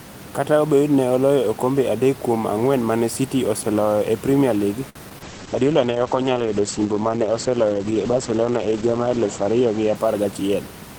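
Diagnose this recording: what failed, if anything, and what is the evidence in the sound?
Network stage, short stall from a late packet: from 4.89 to 4.97 s the speech holds one sound for 59 ms with a slight buzz or dip, then resumes exactly where it paused. Nothing is skipped, which separates it from loss. The empty jitter buffer simply waited, adding 59 ms of delay.

Network stage, short concealed packet loss: brief smears at 5.09 to 5.13 s and 5.19 to 5.22 s, where 20 ms and then 40 ms of audio never arrived. The decoder extended the preceding sound and blended back. Unlike the stall, material is actually missing, not merely delayed.

Codec stage, call bitrate drop: from 5.24 to 10.81 s the speech turns coarse and muffled as the encoder falls from 32 to 9 kbps, with bandwidth narrowing from 20 kHz to 8 kHz. It stays at the lowest rate for about 3.8 s. The dullness is sustained, not a momentary glitch.

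Buffer stage, jitter buffer speed-up: between 10.07 and 10.56 s the speech hurries to 111% speed at unchanged pitch, as the receiver trims short pitch-period slices, about 70 ms in total, to drain excess delay. Pitch stays steady, so this is not a resampling error.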